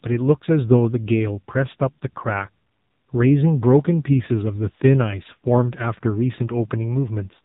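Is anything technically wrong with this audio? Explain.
Yes. Throughout, the speech carries AMR narrowband mobile codec damage. Nothing passes above 3.8 kHz, and the heavy buzzy, synthetic tone fits a low 6.7 kbps mode. A plain low-pass filter would not rebuild the voice this way.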